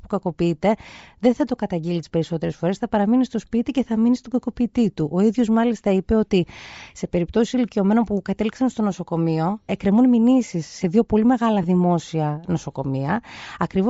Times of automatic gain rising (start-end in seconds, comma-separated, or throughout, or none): none